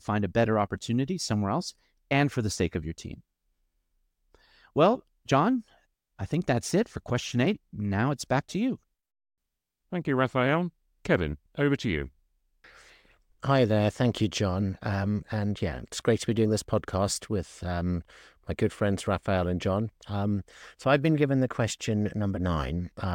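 At 16.94 s, between "to be doing this" and "with um my good", a single sharp click sounds in the speech. The likely cause is dropped samples: a fraction of a millisecond is missing from the stream, so the waveform jumps straight to a later value. The gap is too brief to remove any audible sound.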